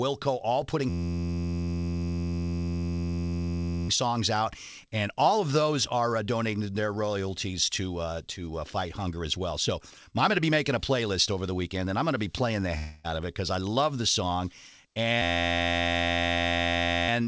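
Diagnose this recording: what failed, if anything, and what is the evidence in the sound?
From 0.89 to 3.89 s, and again from 15.22 s to 17.09 s, the speech collapses into a steady, harsh buzz near 86 Hz. That is a system hang loop at the driver or buffer stage: while the host stalled, the audio hardware kept replaying one 11.61 ms slice of its ring buffer, which fits a 512-sample buffer. It cycled about 258 times in the first event and 161 in the second, and the speech resumes with essentially nothing lost.

Between 12.78 and 13.06 s the speech gives way to a fading buzzy smear lasting about 260 ms, with no true silence before the audio picks up again further on and that stretch of speech is gone. The likely cause is a long network dropout: packets stopped arriving, and the receiver filled the gap by stretching and fading the last decoded sound. The call path's G.722 coding, with nothing above 8 kHz, runs through the whole clip.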